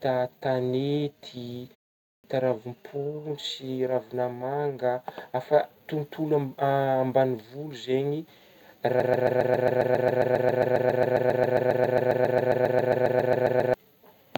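At 2.01 s, right after a short pause of about 0.34 s, there's a clipped start after a pause: the output device seems to have dozed off in the silence, and roughly 0.23 s of sound vanishes while it wakes, so the speech jumps in abruptly without its opening.

From 9.0 s to 13.74 s it turns into a broken-record loop: a 135 ms fragment repeats exactly, back to back, 35 times. The likely cause is a stalled player, encoder or stream resending its last chunk, and whatever should have played there is gone.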